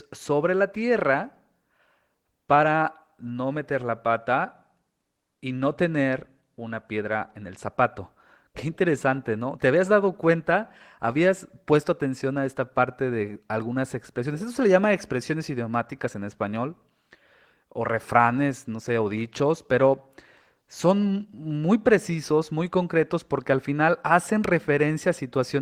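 No technical faults are audible.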